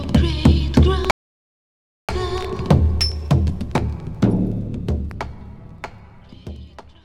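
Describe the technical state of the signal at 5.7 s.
At 5.7 s the signal is intact, with no dropout, clipping, glitch or other audible fault.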